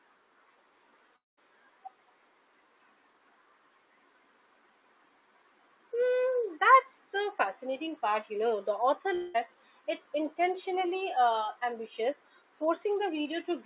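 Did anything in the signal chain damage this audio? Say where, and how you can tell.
Yes. At 1.16 to 1.39 s and again at 9.15 to 9.48 s, the sound smears into a fading buzz and resumes with about 0.2 s gone each time. This is a long network dropout, likely lost packets, with the receiver's concealment filling the gap.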